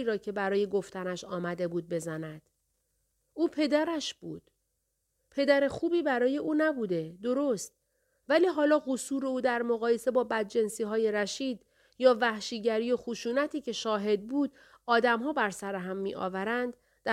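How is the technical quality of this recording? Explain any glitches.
No technical glitches are audible anywhere in the recording.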